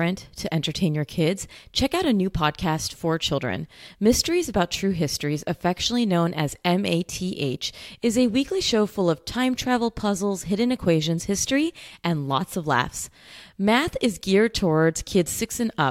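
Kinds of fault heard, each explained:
No technical faults heard.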